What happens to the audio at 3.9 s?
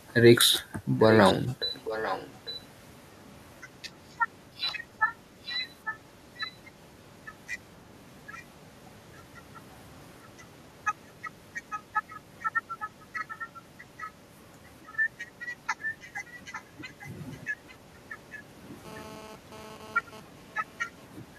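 Nothing goes wrong at 3.9 s; the speech there plays through intact, with no dropout, click, distortion or other fault at that moment.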